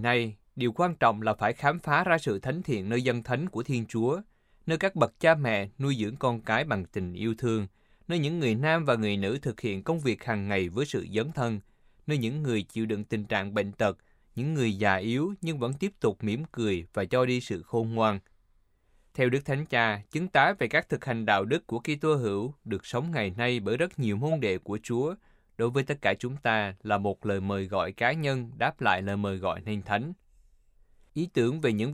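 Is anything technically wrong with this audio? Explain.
Yes. Dropped samples at 28.98 s, between "cá nhân đáp lại" and "lời mời gọi nên": the stream has most likely lost a handful of samples, around a tenth of a millisecond, so the waveform skips straight from one value to a later one. That gap is far too brief to remove any of the speech. The abrupt step is heard as a single sharp click and shows as a thin vertical line through the spectrum.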